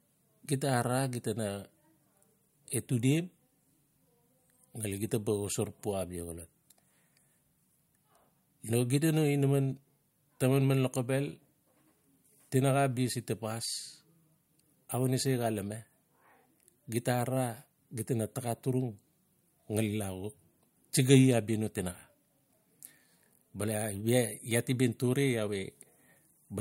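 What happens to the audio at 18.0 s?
Nothing goes wrong at 18.0 s; the speech continues intact through that moment, with no dropout, click or distortion.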